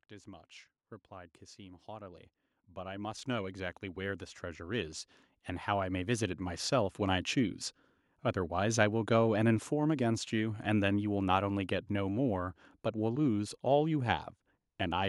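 Speech with automatic gain rising twice: from 0.24 to 5.03 s the level climbs about 13 dB, then from 5.65 to 6.73 s about 5 dB more. Voice and background noise swell together, showing as a slowly widening waveform envelope and a brightening spectrogram noise floor.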